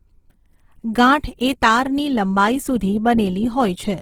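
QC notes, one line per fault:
throughout, Opus compression: the speech was likely squeezed through Opus at a low rate, fitting roughly 16 kbps, with the grain pointing to its music (CELT) mode rather than the speech mode. The bandwidth is not narrowed, and content reaches about 20.4 kHz. With too few bits, the encoder keeps each band's energy but refills the fine detail with folded copies of lower bands or noise. The voice therefore comes across plainly rough, grainy and noisy rather than swirly or muffled.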